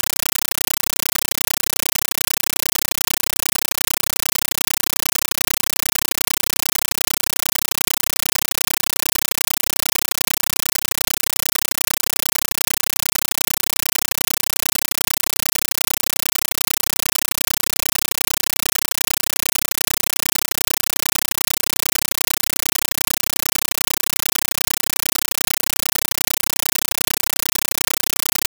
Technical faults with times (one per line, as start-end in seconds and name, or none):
0.00-28.47 compressed stream played as audio